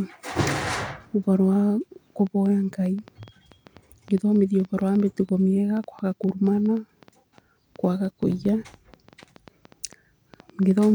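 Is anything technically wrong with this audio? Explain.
Yes, there's a train of clicks running from about 2.27 s right through to 10.83 s. Something is injecting short, similar-shaped pulses roughly six times a second, unevenly spaced, for around 50 clicks in all, which likely points to interference from nearby equipment or a faulty connection or power supply. They peak at about the level of the speech itself, so you hear a ragged ticking or popping laid over everything, pauses included.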